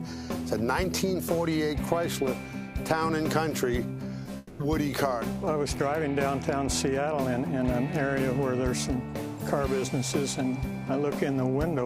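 A brief smear at 4.23 to 4.27 s briefly blurs the audio, and a short sound there could easily be lost. This is short concealed packet loss: about 20 ms of audio never reached the decoder in time, so the receiver filled the hole by extending the preceding sound, continuing its pitch or imitating its noise, and then blended back into the real signal. Just after, from 4.37 to 4.61 s, the audio turns into a held buzz or hiss that fades across roughly a quarter of a second, with no stretch of true silence, before the sound resumes further along. That points to a long network dropout as the likely cause: about 220 ms of incoming audio was missing, the receiver covered the entire gap with a decaying continuation of the last sound, and the lost section was never played.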